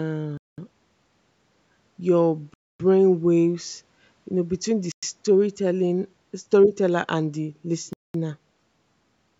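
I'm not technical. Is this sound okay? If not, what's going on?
No, the speech drops out to silence four times, at 0.38, 2.54, 4.92 and 7.93 s, for between about a tenth and a quarter of a second each. That's likely a Bluetooth stall, where the headphones briefly run out of audio.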